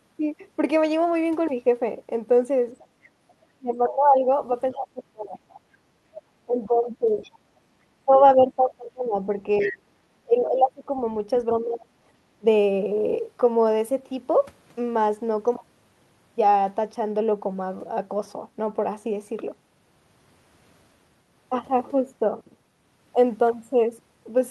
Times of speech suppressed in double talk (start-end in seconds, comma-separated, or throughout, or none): 3.11-5.42, 6.46-12.45